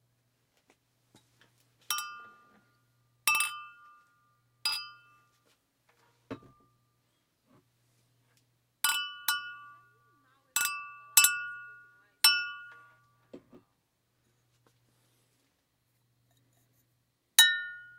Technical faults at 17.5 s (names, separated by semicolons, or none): filter restarted on every block